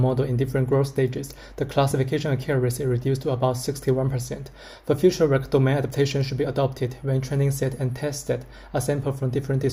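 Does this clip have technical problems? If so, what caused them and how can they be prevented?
Yes. There are two tiny skips, each a brief jump in the waveform, at about 1.91 s and 5.90 s. They are four seconds apart. This is overlap between stream segments. The time stamps of adjacent 4-second segments overlapped, so the player trimmed roughly 10 ms of sound that wasn't actually duplicated, leaving a discontinuity at each boundary. Keeping segment time stamps contiguous at packaging, with no overlap between segments, prevents it.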